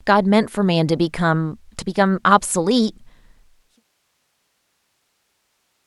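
This speech recording has no technical faults, and its level eases smoothly down in an editor-style fade out that begins around 3 seconds and reaches silence at 3.84 s, with no click or hard edge.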